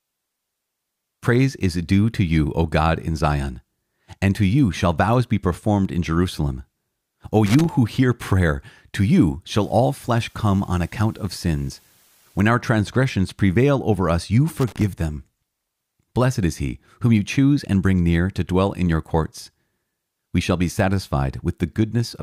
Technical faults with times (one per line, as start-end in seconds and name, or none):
7.46-7.69 loose connector crackle
9.48-12.42 low bit depth with dither
14.59-14.84 loose connector crackle